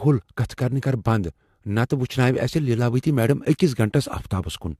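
Throughout, the speech sounds swirly, hollow and smeared, with nothing above 14.4 kHz. The likely cause is generation loss from about three AAC re-encodes, consistent with 64 kbit/s.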